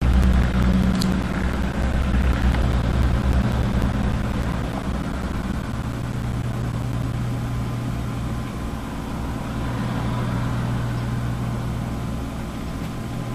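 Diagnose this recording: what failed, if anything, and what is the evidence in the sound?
Periodic USB or driver dropouts run from 0.13 s to 7.13 s as evenly spaced ticks every 0.1 s, ten per second. At the driver or buffer stage, something blocks the bus at a fixed interval, punching roughly 10 ms silent gaps into the signal.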